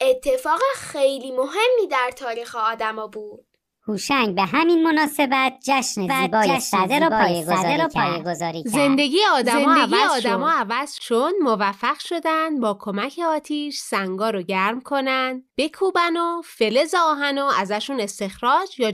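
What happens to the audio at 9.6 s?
At 9.6 s a doubled audio track runs (6.08–10.98 s): an equally loud, clean copy trails by about 0.7 s, likely from a second, slower capture path. Unlike an echo, it never decays and starts and stops abruptly.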